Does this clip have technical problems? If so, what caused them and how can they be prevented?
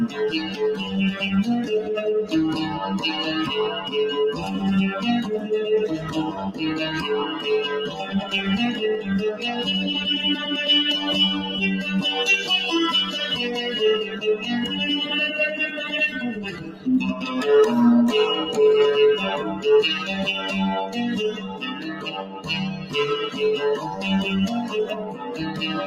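Yes. A noise suppressor applied to music or sounds runs through the whole clip. A suppressor tuned for speech treats sustained tones, ambience and reverb as noise, so the level swings by around 10 dB as held material sinks and attacks pass through, giving a pumping, thinning quality. Unlike compressor pumping, which follows overall loudness, this tracks how steady a sound is, so transients survive while tails collapse. Disable speech noise suppression for non-speech sources.

There are also seven spots where sound is cut by the noise suppressor: 6.31–6.6 s (about 10 dB down), 7.89–8.14 s (about 6 dB), 14.05–14.48 s (about 8 dB), 16.35–16.87 s (about 11 dB), 21.31–22.49 s (about 11 dB, the longest), 22.74–22.94 s (about 10 dB) and 24.9–25.38 s (about 9 dB). In each, a sustained or decaying sound is pushed down harder than its surroundings or has its tail cut short. This differs from a dropout because the sound dips without vanishing and onsets stay intact. 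Using a music mode or bypassing the suppressor would prevent these cuts.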